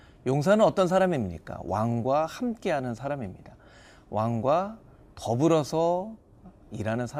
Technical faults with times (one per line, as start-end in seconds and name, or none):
none